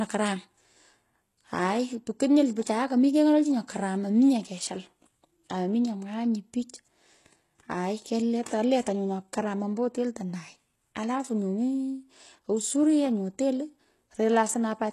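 From start to finish the speech carries plainly audible codec damage, most likely HE-AAC compression at a very low bitrate, something like 16 kbps. The upper band is rebuilt by copying lower bands upward rather than coded directly, so s sounds come out gritty and metallic. On a spectrogram the treble looks like smeared, repeated copies of the lower bands above the crossover, and everything stops abruptly at 12.3 kHz, with nothing above.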